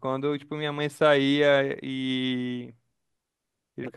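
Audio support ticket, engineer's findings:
No audible faults found; no action required.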